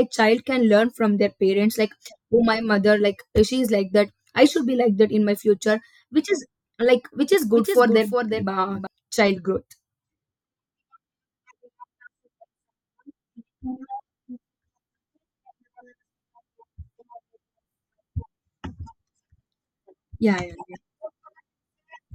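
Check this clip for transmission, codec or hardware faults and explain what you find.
One fault stands out: a doubled audio track from 7.33 to 8.87 s. During that stretch the speech is joined by a second, full-band copy trailing roughly 0.4 s behind and sitting about 5 dB lower, so every syllable gets a dry echo with no room tail. The likely cause is the signal being captured twice, once through a slower path. A spectrogram shows the speech pattern repeated, shifted right, starting and stopping abruptly at the segment edges.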